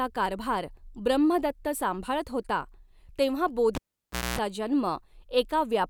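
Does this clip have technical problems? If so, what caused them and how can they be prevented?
Yes, after "ब्रम्हदत्त सांभाळत होता तेंव्हा" (3.75–4.39 s), a live cable was pulled and plugged in: pop, 0.59 s dropout, 0.24 s of 60 Hz buzz, pop. Mute before repatching.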